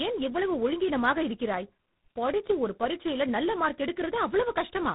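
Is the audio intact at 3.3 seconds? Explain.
No. At 3.3 seconds, as throughout, tandem speech coding re-encodes speech already degraded by GSM through G.726, compounding errors into rough, warbly, muffled speech with nothing above 3.8 kHz.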